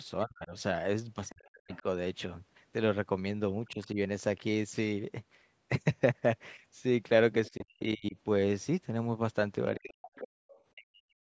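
From 0.25 to 1.84 s the speech is repeatedly pushed down, by as much as about 40 dB, while a second voice leaks in faintly from 1.29 to 1.81 s. This is speech suppressed in double talk, likely from an echo canceller that could not separate near speech from loudspeaker echo and ducked both. Unlike a network dropout, these dips line up with the other party talking. The same thing happens more mildly, about 10 dB, at 3.72 to 3.98 s, deeply again at 7.5 to 8.16 s, and from 9.76 s to the end.

The other side's voice leaking through is a separate fault: a second talker sitting well below the main speech at 1.29 to 1.81 s, 3.66 to 3.87 s, 7.46 to 7.65 s, and most audibly, only about 15 dB down, at 10.15 to 10.63 s. This is likely residual loudspeaker echo that the canceller failed to remove. It differs from room reverb because it is a different voice, not a smeared copy of the main talker. The whole recording also stops at 8 kHz, which comes from the call's normal microphone processing.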